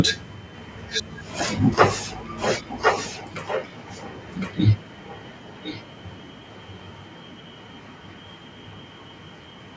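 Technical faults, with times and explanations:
0.55 to 1.19 s and 2.37 to 9.76 s, echo leak: a copy of the speech returns about 1.06 s late, roughly 10 dB and then 15 dB below it, likely from a far-end loudspeaker that the echo canceller didn't fully suppress. It's a distinct repeat, unlike reverberation's smooth decaying tail.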